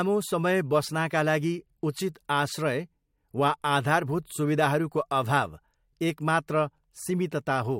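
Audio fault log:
No fault can be heard anywhere in this speech recording. Nothing in it calls for an entry in the log.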